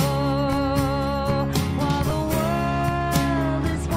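At 2.1 s there are lost LE Audio frames. About 10 ms of sound is missing, which fits a single dropped frame. The LC3 decoder fills the gap by repeating the previous spectrum with scrambled signs. Any tone briefly becomes a short, noisy smear.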